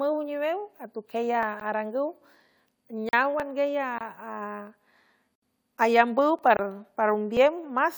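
At 1.43 s an overlap between stream segments removes about 10 ms of speech, leaving a tiny skip. The waveform shows a sudden discontinuity, and the spectrogram shows a thin vertical broadband line. The same happens at 3.40, 6.39 and 7.37 s, where duplicated segment timing trims real audio.

Blocks of digital silence fall at 1.60 s, 3.09–3.13 s, 3.98–4.01 s, 5.35–5.42 s and 6.57–6.59 s, lasting 14 to 70 ms. The two 23 ms gaps fit an unfilled 1024-sample buffer. Each is heard as a tick or short hole. On the waveform it is a flat, near-silent stretch, and on the spectrogram it is a blank column.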